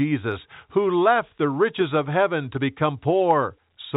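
No technical faults occur in this speech at any point, so there is nothing to place in time order.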